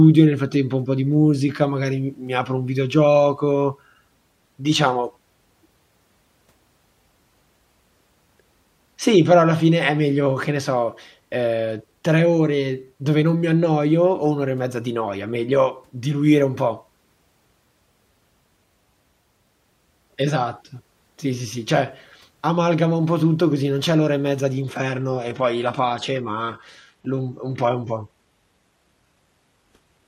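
At 24.62 s, after "l'ora e mezza di", the speech switches without a gap to an adaptive stream at a lower bitrate until 30.08 s. Artefacts rise, which fits a 16 kbit/s HE-AAC version. A spectrogram shows a sharp ceiling at 12.3 kHz.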